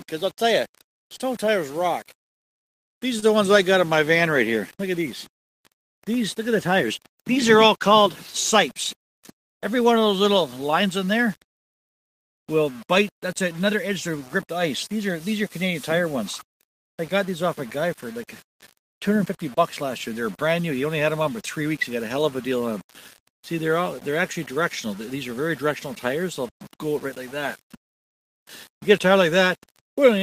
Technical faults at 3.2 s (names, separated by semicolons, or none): low bit depth without dither; short stall from a late packet